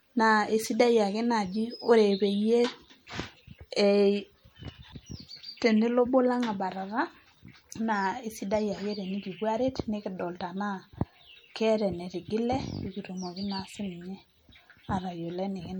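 Throughout the speech, the sound is watery and swirly, with the treble dulled above a fixed point and a metallic chirp on s sounds. This is likely MP3 compression, with the damage plainly audible, which fits a 64 kbps encode: too few bits, so high frequencies are cut and weak detail flickers between frames.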